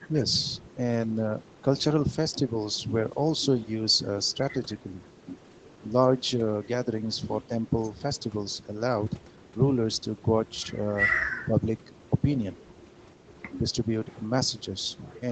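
Around 4.80 to 4.86 s the level dips by roughly 5 dB for a split second. That's speech suppressed in double talk, likely the echo canceller mistaking overlapping far-end sound for its own echo and ducking everything together, so the talker briefly sounds pulled back.

At 12.75 to 12.79 s there's a very faint echo leak, a scrap of the voice coming back about 162 ms late and roughly 35 dB down. The likely cause is a loudspeaker end whose canceller let a bit of its mic pickup slip through.

The same double-talk suppression returns at 13.59 to 13.76 s, a slightly longer dip of around 5 dB. Once again, the talker's voice gets squeezed, likely while both sides overlap, giving a quick sag in loudness before it recovers.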